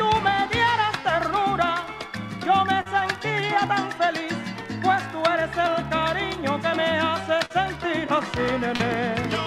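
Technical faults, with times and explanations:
2.81–2.87 s, 7.45–7.52 s and 8.76–8.81 s: short concealed packet loss. Each time about 40 ms of audio failed to arrive, and the receiver filled the gap by extending the preceding sound before blending back into the real signal, which gives a brief smear or wobble. On a spectrogram each gap shows as a short stretch of smoothed, repeated harmonics or blurred noise. The waveform shows a slightly too-regular patch with a soft seam at each end.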